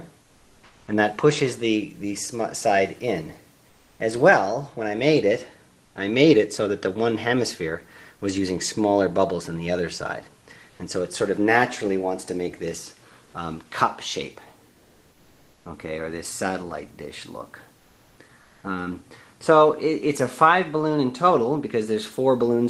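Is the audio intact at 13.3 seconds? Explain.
No, not quite. From 13.25 to 13.33 s, an 80 ms stretch, the real background drops out and comfort noise stands in for it. The likely cause is Opus DTX: the sender pauses transmission when no speech is detected, and the receiver pads the gap with synthetic noise. With the background sitting about 37 dB under the loud parts and no level change, you'd just catch a brief flat, textureless patch where the ambience should be.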